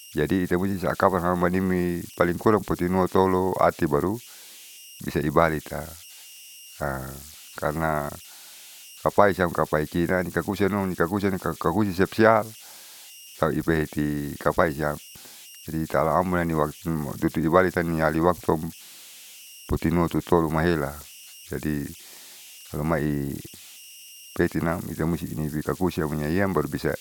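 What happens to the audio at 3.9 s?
At 3.9 s, converter idle tones are present, as throughout the clip. An undithered converter settles into repeating bit patterns, leaving a tone around 3 kHz, about 22 dB below the speech.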